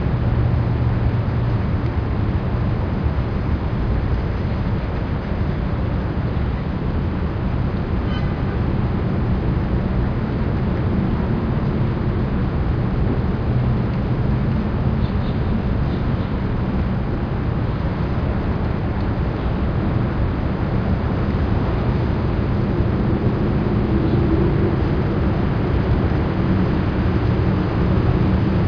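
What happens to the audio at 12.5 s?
Nothing goes wrong at 12.5 s; the audio plays through that moment intact, with no dropout, click or other fault.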